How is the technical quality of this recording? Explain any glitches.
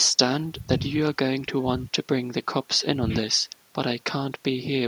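No glitches can be heard anywhere in the recording: the speech runs without dropouts, clicks, distortion or other technical faults.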